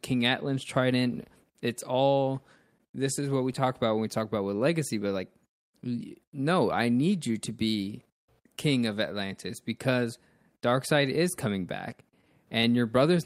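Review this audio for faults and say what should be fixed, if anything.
The speech throughout shows clock drift between sender and receiver. The sender's clock runs about 2% slow, so the receiver's buffer keeps draining and must be refilled. Unlike random packet loss, the hiccups all push the same way. Locking both ends to a common clock or resampling at the receiver would prevent this.

From 0.21 s to 12.12 s there are repeated timing corrections: the receiver keeps repeating short pieces to stretch the audio to about 98% speed, adding roughly a fifth of a second overall. Unlike wow or flutter, the pitch stays steady and only the tempo wavers. Adaptive resampling instead of repeating pieces would smooth this out.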